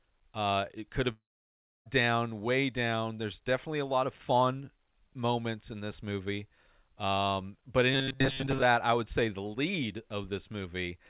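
At 1.12 s, right after "it could", the sound breaks off. This is a long network dropout. Packets most likely stopped arriving. The receiver carries the last sound on as a fading buzz. It then leaves about 0.64 s of near silence. The gap lasts until 1.87 s. Speech resumes at "down way down". About 0.74 s of audio never returns. Nothing above 4 kHz can be heard here or anywhere in the clip, as on a G.711 call path.

From 7.93 s to 8.62 s the speech turns harsh and metallic. This is robotic sound from repeated short buffers. New audio likely arrived too seldom. The receiver kept replaying its last short slice, and most of the real audio in this span was skipped. The replays force a steady buzz at 134 Hz. That fits a slice about 7.5 ms long. Normal speech returns at "I would say the".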